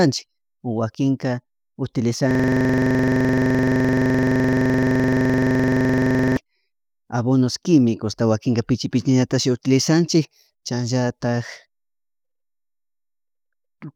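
From 2.31 to 6.37 s, a rattling 23.4 Hz buzz of one repeated 42.7 ms fragment: a system hang loop, the system froze while hardware kept replaying its buffer.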